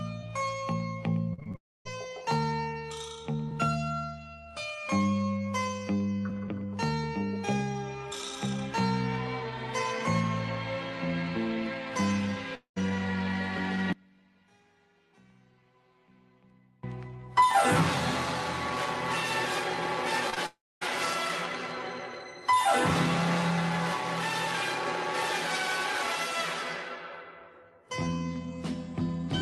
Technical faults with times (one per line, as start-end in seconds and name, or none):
1.33-1.56 repeated packet loss (robotic sound)
1.56-1.87 long network dropout
12.55-12.78 long network dropout
13.93-16.83 one channel inverted
20.30-20.38 short concealed packet loss
20.46-20.83 long network dropout